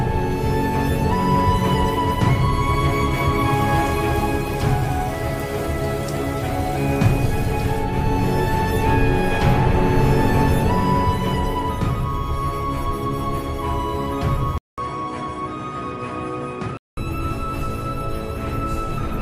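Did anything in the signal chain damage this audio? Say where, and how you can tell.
Yes. At 14.58 s the sound drops out for 200 ms. It then returns duller and a few decibels quieter, with nothing above 10.6 kHz and a new background hiss roughly 40 dB below the signal. This lasts until 16.97 s. The stage is the input device selection, most likely the input switched to a poorer device. A different microphone brings its own narrower band, tone, gain and noise.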